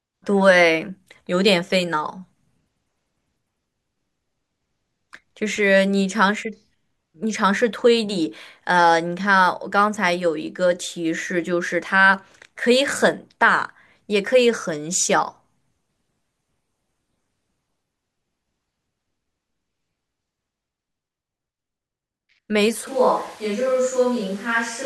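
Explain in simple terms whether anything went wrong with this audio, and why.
Near the very end, from about 22.87 seconds until the clip stops, the speech suddenly turns roomy and hollow, thinner in the low end, a little quieter, with more background noise. This is a switch to a distant microphone, likely because the close microphone's signal dropped out.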